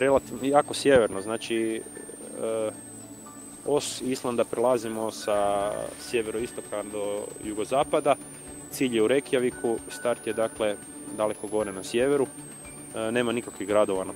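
A switching supply whistle runs throughout: a high tone drifting between about 7.9 and 10.1 kHz, mostly near 10 kHz, roughly 20 dB below the signal, from a supply in audible burst mode or beating with another supply.

A call bitrate drop from 3.5 to 7.71 s cuts the encoder from 40 to 16 kbps, bottoming out for 1.89 s. The coarser coding makes the sound rough, watery and dull until the bitrate recovers.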